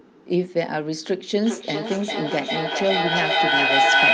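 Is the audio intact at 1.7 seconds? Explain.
No. At 1.7 s the speech keeps returning roughly every 0.4 s, thinner and ringier, building to about 6 dB above the original. This is feedback echo between two devices, running from 1.43 s to the end, as one device's speaker loops back into another's microphone.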